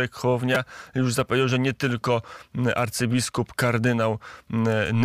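At about 0.55 s there's a repeated buffer: new audio didn't reach the device in time, so it replayed the last block it had. The block is tiny, roughly 5 ms, which points to a small playback buffer. It goes out twice more, and each replay butts hard against the previous one, so instead of a stutter you get a quick click or brief buzz. About 10 ms of the real speech is lost there.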